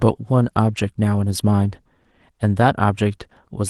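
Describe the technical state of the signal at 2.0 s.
At 2.0 s the speech signal is intact, with no audible fault at that point.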